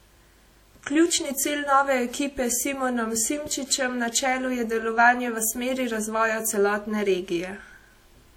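Across the whole speech clip there is plainly audible transform-codec damage, most likely from WMA compression at a low rate, which fits a bitrate of around 48 kbps. Quantisation noise smears over tens of milliseconds, so the sound rings and the background hiss swells and fades with the voice. On a spectrogram, weak partials drop out as patchy holes and blocky texture, with nothing above 20 kHz. The waveform shows pre-echo before sharp onsets.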